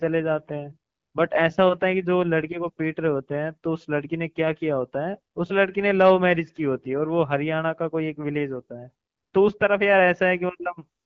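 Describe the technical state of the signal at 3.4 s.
At 3.4 s the signal is intact, with the speech passing through the AMR wideband (HD Voice) codec at 12.65 kbit/s, a rate at which it stays clear.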